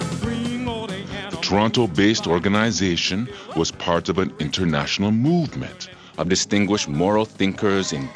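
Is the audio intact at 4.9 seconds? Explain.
No. At 4.9 s the audio is inside a wrong sample rate fault that runs from the start to 6.19 s. The sound plays at about 0.92 times normal speed and 1.47 semitones low, which fits material made at 24 kHz being played at 22 kHz. Speed and pitch drop together by the same ratio, which sets it apart from a pitch shift or a time stretch, where only one of them changes.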